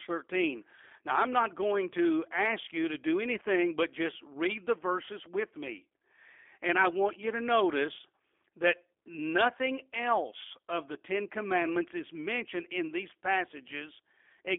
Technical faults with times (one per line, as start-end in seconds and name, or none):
0.00-14.59 G.729 codec